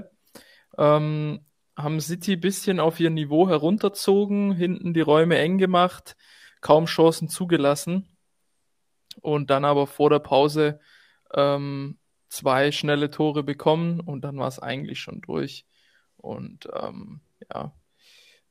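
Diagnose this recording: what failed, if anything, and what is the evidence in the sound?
No stage in the chain, from capture and conversion through transmission, storage and playback, shows any audible failure, and the speech signal gives no evidence of a technical fault.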